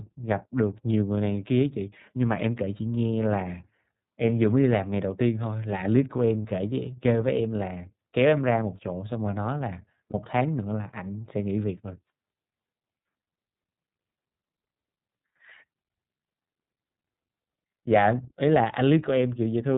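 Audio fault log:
throughout: iLBC codec. The whole speech clip has gone through narrowband VoIP coding, so nothing above 4 kHz survives and everything sounds boxed-in and telephone-like. The damage is plainly audible: there's a rough, slightly synthetic edge on the voice, the kind you get when each 30 ms frame's excitation is squeezed on its own. The bitrate sounds like it fits iLBC's 13.33 kbps mode, and the lack of any smearing across frames is consistent with that.
6.41 to 6.45 s and 10.10 to 10.14 s: lost iLBC frames. Each time a single 30 ms frame goes missing, and the decoder papers over the hole by repeating the last pitch cycle with some noise mixed in. You hear a brief held, faintly buzzy vowel-like smear instead of the real sound. Because iLBC frames don't depend on their neighbours, the voice snaps straight back once the next frame arrives.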